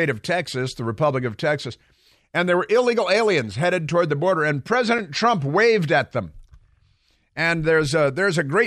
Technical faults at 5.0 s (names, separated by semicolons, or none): block of digital silence